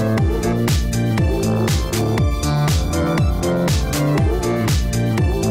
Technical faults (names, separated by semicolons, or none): none